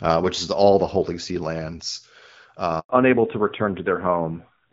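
Up to 2.79 s the speech carries the open, airy top end of HD Voice, with only light coding roughness that fits AMR-WB at around 12.65 kbit/s. At 2.79 s a handover gap cuts in. The voice fades within a few tens of milliseconds and stays silent for 100 ms, until 2.89 s, while the call switches networks. Unlike a packet-loss dropout, nothing is patched over: there is no smeared or repeated fragment, only clean silence.

From 2.89 s to the end the call has fallen back to narrowband. Everything above 4 kHz is gone, so sibilants lose their hiss and the voice sounds duller and rougher, which points to AMR-NB at about 7.4 kbit/s. What separates this from a simple low-pass filter or muffled microphone is the timing. The bandwidth drops in one step, right where the silence ends, and stays narrow for the rest of the clip.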